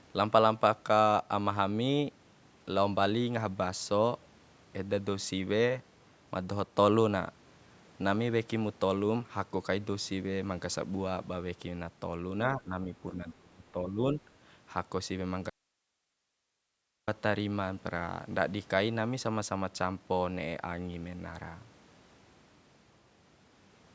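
Speech suppressed in double talk, likely from an echo canceller confusing the talker with loudspeaker echo while both sides spoke, pulls the voice down by about 15 dB from 12.57 to 12.91 s and by about 20 dB in broken patches from 13.12 to 14.17 s. Inside that second stretch, the other side's voice leaking through, likely residual loudspeaker echo the canceller missed, appears as a brief scrap at 13.3 s, roughly 20 dB below the talker. An audio dropout to a faint residue, likely a lost signal on a path that stayed live, then cuts the speech abruptly from 15.50 to 17.08 s, leaving about 1.6 s of hiss far below normal level.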